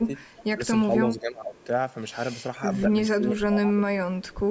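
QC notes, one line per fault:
0.03–0.1 s, 0.55–0.62 s, 1.01–1.58 s, 3.17–4.11 s, speech suppressed in double talk: the echo canceller, likely unable to tell near speech from far-end echo while both sides talked, pulled the speech down, dipping it by about 5 dB at first and by up to about 25 dB in the last stretch.
0.28–0.44 s, 1.56–1.64 s, 4.22–4.39 s, echo leak: residual loudspeaker pickup, likely missed by the far-side echo canceller, returns as a faint copy of the speech 433 ms late, sitting about 25 to 35 dB below the direct speech as brief scraps.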